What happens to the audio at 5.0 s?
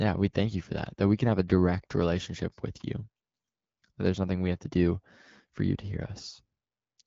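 At 5.0 s the audio is intact, with no fault at that moment.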